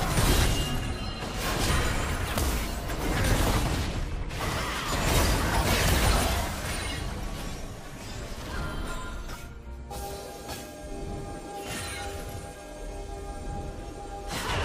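At 1.68, 2.94, 4.40 and 8.19 s, and 12.04 to 12.06 s, compressed frames are skipped. Whole frames of about 23 ms go missing, so the audio leaps ahead roughly 70 to 150 ms.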